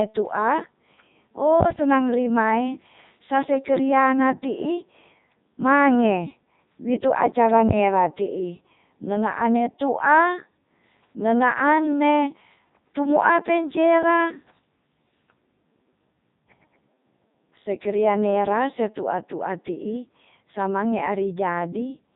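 From start to finish the speech passes through the Codec 2 vocoder, and heavily, with a character that fits its 3.2 kbit/s mode. Only pitch, voicing, energy and a coarse spectral envelope survive; the decoder rebuilds each voice from sine waves, so the original waveform is gone. The result sounds robotic and buzzy. A spectrogram shows rigid harmonic combs with smeared, blocky formants, and the waveform looks unnaturally periodic.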